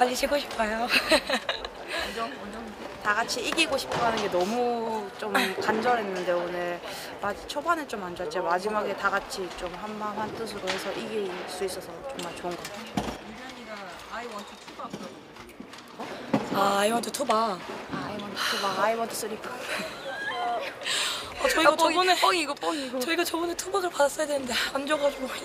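Nothing is technically wrong with this audio, and no faults can be heard anywhere in it.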